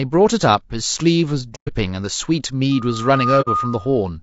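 A speech clip, and the coding is rough the whole way through, grainy, with noise filling in between the harmonics and a thin, somewhat synthetic top end. That's likely low-delay AAC compression, AAC-ELD at around 32 kbps, where the short frames can't resolve the pitch harmonics properly at that rate. There's AAC frame loss with muting at 1.55 to 1.69 s and again at 3.41 to 3.48 s. The decoder zeroed the missing frames, so the sound fades out and back in over the gap, leaving soft-edged holes. From 2.71 s to 4.07 s a loudspeaker feedback squeal comes in at 1.2 kHz. The mic is picking up its own loudspeaker, and the loop gain tops one at that frequency, so the tone swells over about half a second until it sits a few dB above the speech.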